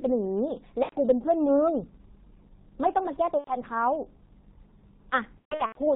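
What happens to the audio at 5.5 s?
Right around there, from 5.39 to 5.80 s, you hit VoIP packet loss concealed by the speech codec. About 270 ms of the signal goes missing in bits scattered over roughly 0.36 s, with the longest gap at 120 ms, which fits nine lost 30 ms frames. The decoder fills each gap by carrying forward its last pitch and filter settings while turning the gain down, so the speech smears into a buzzy tone or coloured noise that fades, and stays weak for a moment even between losses.

Underneath that, the whole clip runs through the G.723.1 codec at 6.3 kbit/s, and the damage is heavy. Nothing above 4 kHz gets through, and the slow-updating voice model leaves the speech muffled and hoarse, with blurred consonants, so the concealed stretch sits on an already dull, rough-sounding signal.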